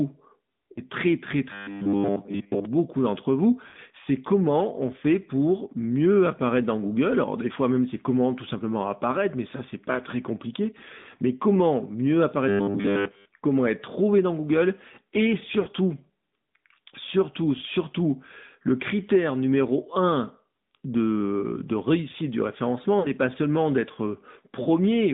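Throughout, the speech carries the AMR narrowband mobile codec sound: the line is confined to roughly 150 Hz to 3.7 kHz, so sibilants lose their edge. The voice has a plainly audible buzzy, synthetic texture, consistent with a mid-range rate near 10.2 kbps. Unlike a simple low-pass filter, the damage is in the voice itself, which sounds modelled rather than merely muffled.

At 0.72 s, just before "très très", there is a brief dip of about 40 ms. These are lost AMR speech frames, roughly two 20 ms frames. The decoder carries the last pitch and vocal tract settings forward at falling gain, so the sound smears and sags rather than cutting to a hard gap.

From 1.52 to 2.65 s the speech turns into a rigid, metallic robotic sound from repeated short buffers, with a fixed buzz at 100 Hz. That pitch fits a 10 ms slice being replayed while most of the real audio is skipped, likely because audio arrived too seldom. 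It differs from frame loss because it lasts over a second, keeps loosely following the speech, and holds a steady imposed pitch instead of fading.

Frame losses recur at 3.68 s, between "beaucoup d'entre vous" and "c'est comment on fait", and at 10.98 s. Each lasts about 80 ms, long enough for the concealed sound to stretch and nearly fade before the voice returns rough. The same robotic buzz comes back from 12.48 to 13.25 s. Further losses at 15.60 s (about 60 ms) and 22.99 s (about 40 ms, between "de réussite du" and "pas seulement d'être") give shorter dips and warbles.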